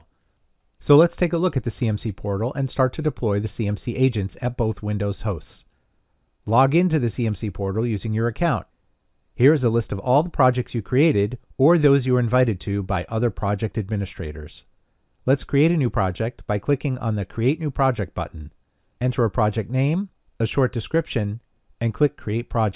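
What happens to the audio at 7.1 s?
Nothing goes wrong at 7.1 s; the audio runs through that moment intact, with no dropout, click or other fault.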